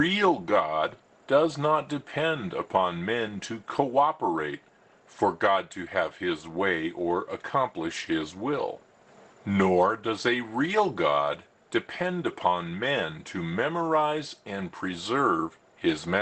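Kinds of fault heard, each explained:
No audible faults in this recording.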